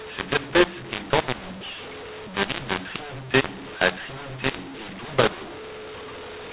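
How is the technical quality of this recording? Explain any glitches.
The quality is poor throughout, because of a single decoding fault. The speech was coded as A-law G.711 but played back as mu-law. This mu-law and A-law mix-up scrambles the levels, making the voice harsh and distorted, with noise filling the pauses.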